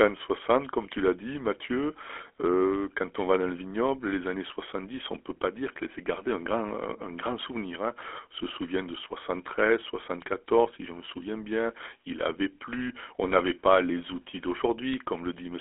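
GSM full-rate codec damage runs through the whole speech clip. Regularly spaced pulse excitation adds a plainly audible buzzy, gravelly roughness, consistent with a 13 kbps coder, and the 300 Hz to 3.4 kHz telephone band leaves nothing above 3.8 kHz.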